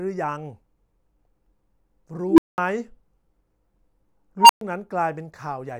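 At 2.28 s and again at 4.40 s the speech is interrupted by an unstable filter: a recursive stage whose feedback runs away, so a tone near 300 Hz, then around 1 kHz, swells over roughly 0.1 s into a clipped squeal before overflow mutes the output for 0.2 s and 0.12 s respectively. The waveform shows an exponentially widening envelope slamming into the clipping limit, then flat silence; the spectrogram shows a brightening horizontal line ending in a blank gap.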